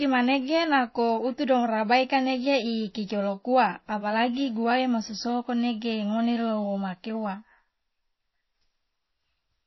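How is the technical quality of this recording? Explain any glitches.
The recording is noticeably degraded from start to finish. The speech sounds dull and watery, with nothing above 5.8 kHz, and a swirly, metallic edge clings to s sounds. This is likely MP3 compression at a very low bitrate, roughly 25 kbps. Starved of bits, the encoder cuts off the treble and drops quieter frequency components, which then flicker in and out from frame to frame.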